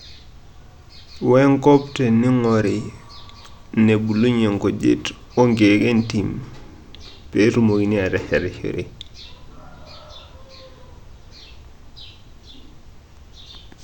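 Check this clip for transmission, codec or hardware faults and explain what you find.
No faults turn up in this clip when it is checked for problems of that sort.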